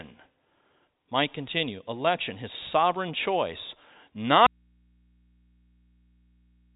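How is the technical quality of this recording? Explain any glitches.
One glitch stands out. An audio dropout to a faint residue begins at 4.47 s and lasts to the end. The speech cuts off abruptly, and only a low mains hum remains, roughly 40 dB below the earlier level. This is likely a lost signal feed with the input still live, picking up hum. The narrow, telephone-band sound before the break comes from G.711 coding, which passes nothing above about 3.8 kHz.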